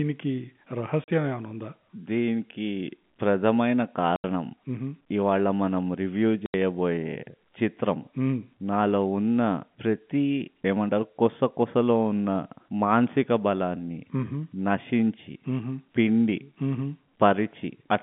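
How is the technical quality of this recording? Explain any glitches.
The recording has three short dropouts from packet loss filled with silence, heard over a telephone-band G.711 line that cuts everything above about 3.5 kHz.

The gaps fall at 1.04 to 1.08 s (40 ms), 4.16 to 4.24 s, and 6.46 to 6.54 s (80 ms each). Lost packets were replaced with dead silence, so the speech cuts out abruptly with hard edges. The gap lengths fit 20 ms packets.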